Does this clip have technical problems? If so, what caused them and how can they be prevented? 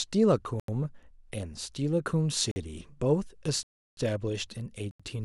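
Yes, there are blocks of digital silence at 0.60, 2.51, 3.63 (341 ms) and 4.91 s, where the speech drops out. The 85 ms gaps fit 4096-sample buffers left unfilled in time. To prevent this, use larger buffers or lighten the processing load so the output never runs dry.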